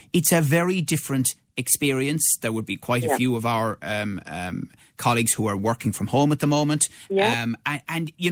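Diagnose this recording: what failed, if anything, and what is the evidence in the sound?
Nothing failed here: the speech holds together all the way, with the Opus voice compression doing its usual job in its hybrid, full-bandwidth mode and nothing in the sound pointing to a broken stage anywhere along the chain.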